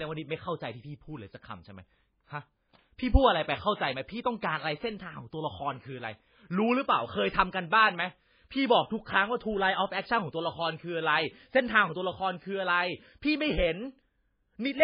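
MP3 compression damages this speech recording from start to finish, and the damage is heavy. Nothing survives above about 5 kHz, so the treble sounds cut off. The sound is watery and swirly, with metallic chirps on s sounds. The likely cause is a very low bitrate, around 16 kbps, which starves the encoder of bits and makes it zero out weak frequency lines that flicker on and off from frame to frame.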